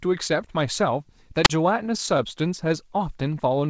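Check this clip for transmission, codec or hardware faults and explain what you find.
Two faults stand out in this speech clip, both in its middle section. The call path's bandwidth ends at 8 kHz, consistent with G.722.

A wireless microphone squelch dropout occurs from 1.44 to 1.50 s. The analogue FM link weakened until the receiver's squelch shut the output. Hiss rises briefly. Then there is a near-silent hole of about 36 ms before the speech returns.

Repeated stalls (stutter) follow, from 1.86 to 2.72 s. Packets arrived late, so the jitter buffer kept running dry. Nine short gaps were filled by extending the last sound, the longest lasting 14 ms. Nothing is lost, but the speech drags and stutters.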